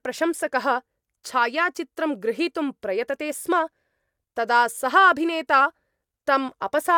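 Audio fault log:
Nothing to flag here, as this speech clip comes through without any faults worth noting.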